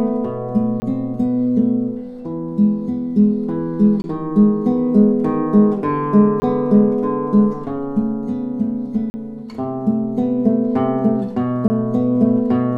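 Blocks of digital silence drop in at 0.80, 4.02, 6.40 and 11.68 s for 20 ms each, and at 9.10 s for 40 ms. Output samples likely went unfilled and became zeros. Each gap cuts in and out abruptly, heard as a short hole.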